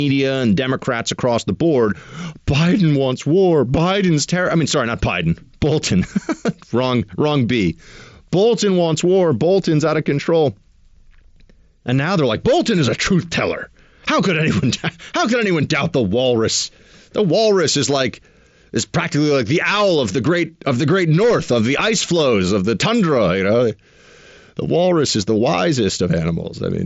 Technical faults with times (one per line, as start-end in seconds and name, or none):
none